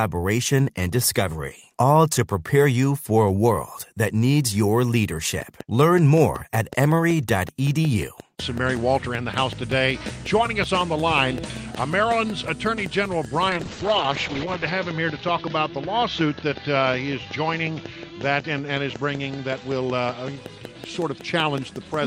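From 5.42 s to the end, a steady ticking sits over the sound and through the pauses: a train of clicks at about 5.4 per second, evenly spaced and peaking a few decibels above the audio. Interference from nearby equipment or a faulty connection or power supply is the likely source.

Between 13.51 s and 20.43 s the audio turns rough and muffled, with the top end gone above 8 kHz instead of reaching 20 kHz. This is a call bitrate drop from 32 to 8 kbps, which forced coarser encoding and held its worst for about 1.2 s.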